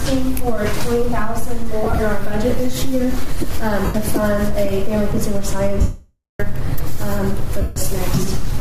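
The audio has four bursts of lost LE Audio frames: scattered gaps totalling 67.5 ms between 1.83 and 1.99 s (longest run around 30 ms), 90 ms at 3.85 s, 585 ms from 5.81 to 6.40 s, and 150 ms at 7.61 s. The sizes fit 7.5 ms LC3 frames. The decoder repeats the last spectrum with scrambled phase, so tones smear into noise. The long dropout fades toward silence. On a spectrogram, sharp harmonic lines turn into blurred, flat-topped smears. The waveform shows the long loss tapering away. The light lossy compression stays subtle.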